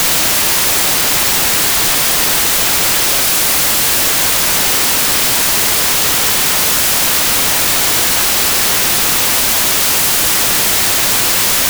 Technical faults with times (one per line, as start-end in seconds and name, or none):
0.00-11.69 wrong sample width